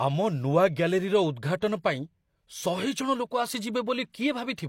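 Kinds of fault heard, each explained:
Pre-echo: at 1.60 s, a 16 ms hiss runs just ahead of a sharp onset in the speech. The transform codec spread quantisation noise sized for that loud attack across its whole block, so the quiet moment before it fills with noise and the attack smears.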